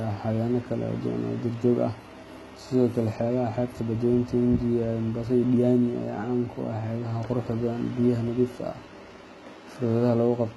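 From start to finish the treble of the speech has a gritty, metallic sheen, and s sounds come out lispy. This is likely HE-AAC compression, with heavy damage that fits a bitrate near 16 kbps. Only the lower band is truly coded, and the upper band is patched in by copying it upward under a coarse envelope. On a spectrogram, the upper region looks like repeated, blocky copies of the lower harmonics that fail to line up across the crossover.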